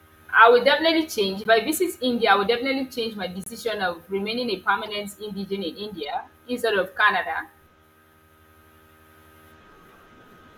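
Speech, with four short chirping blips at 1.44–1.46 s, 3.42–3.48 s after "definitely change my", 4.85–4.88 s before "indigene in", and 6.03 s before "instead of". This is a corrupt frame decoded fault: damaged compressed frames were played anyway, so energy lands at the wrong frequencies for a frame or two each time.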